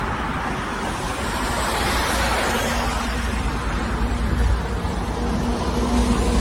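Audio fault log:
Throughout, generation loss: the sound has that swirly, hollow quality with smeared edges and soft, blurred attacks, and nothing comes through above about 16.6 kHz. It's likely been through a lossy codec, something like AAC at around 64 kbit/s, and re-encoded half a dozen or more times. Each pass quantises again on a shifted frame grid, so noise and spectral gaps build up beyond what that bitrate alone would give.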